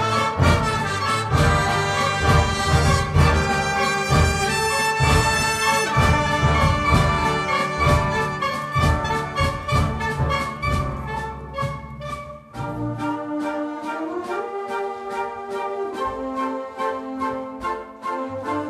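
Listening through the recording, nothing stood out as a technical problem at any point.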